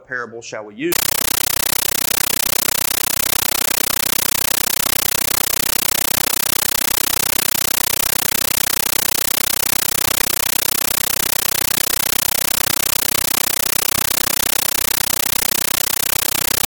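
A compressed stream played as audio from 0.92 s to the end: an undecoded AC-3 bitstream, 13.3 ms noise bursts at 31.25 Hz, heard as very loud chattering static.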